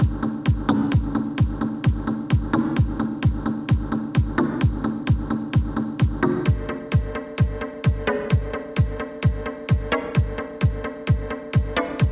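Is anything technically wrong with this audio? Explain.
No, nothing is technically wrong.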